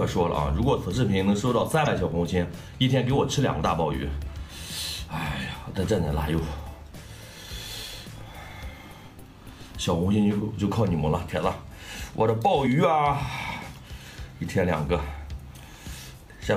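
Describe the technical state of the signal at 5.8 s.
At 5.8 s the signal is intact, with no dropout, distortion, clipping or other technical fault audible at that moment.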